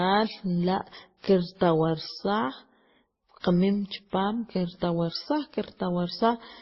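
Across the whole clip, the speech was likely transcoded between lossy codecs, consistent with a low-rate MP3 passed through Opus and then WMA. Nothing remains above 5.7 kHz, and the artefacts from each stage overlap, leaving the speech dull throughout.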